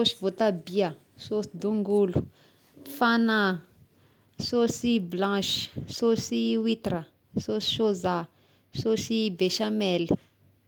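Nothing in the speech stood out as a technical problem on listening.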